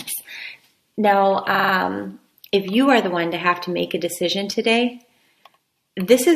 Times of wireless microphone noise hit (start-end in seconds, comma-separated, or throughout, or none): none